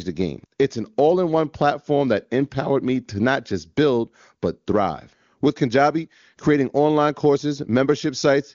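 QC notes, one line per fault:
Nothing here needs flagging: the speech comes through the AMR wideband (HD Voice) path with only faint coding texture at most, which fits the codec running at its top 23.85 kbit/s mode.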